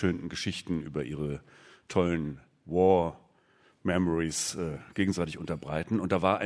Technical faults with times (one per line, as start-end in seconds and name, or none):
none